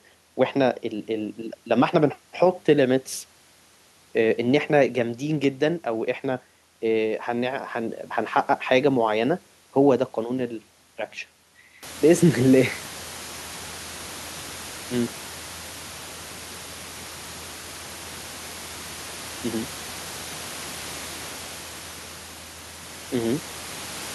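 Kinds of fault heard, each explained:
No system faults are present in the speech signal; the background sound in the room rises by about 20 dB at around 12 s but stays about 18 dB below the speech, and that belongs to the recorded environment rather than to the signal chain.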